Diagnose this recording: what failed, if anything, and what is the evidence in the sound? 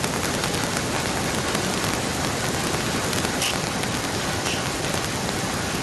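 Integer overflow at sample-format conversion. Loud peaks crack violently throughout, far harsher than clipping. About 12 dB of excess gain wraps a small fraction of samples to the opposite sign.

Echo leak in call processing. From 0.26 s onward, a copy of the speech returns 1.03 s late, about 5 dB down. Likely a far-end echo canceller missing loudspeaker pickup.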